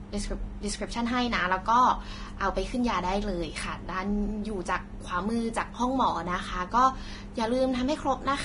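Speech with heavy Vorbis compression throughout: nothing above 10.6 kHz, and hissy, grainy treble from coarse quantisation, likely a low bitrate around 30 kbps.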